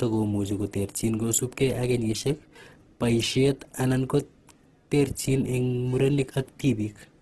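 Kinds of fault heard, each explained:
Opus compression: Heavy roughness and graininess run through the speech, likely from Opus in its music mode starved at about 12 kbps, filling bands with folded or noise content. A spectrogram shows a hard ceiling at 12.5 kHz and speckled, smeared harmonics.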